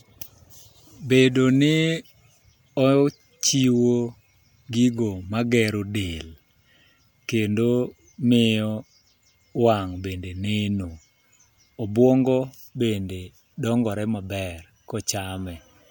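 Clock slip clicks run from 0.10 to 15.80 s through this speech recording as faint ticks roughly every tenth of a second, each a single dropped or repeated sample, likely from unsynchronised clocks about 200 ppm apart.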